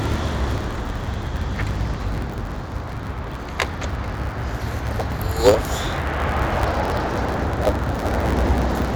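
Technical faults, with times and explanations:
Throughout, block size mismatch (truncated): each block loses its tail because one stage writes longer blocks than the next reads, leaving a 109 Hz buzz and audio running 1.09 times fast at its normal pitch, unlike a sample-rate error, which would raise the pitch.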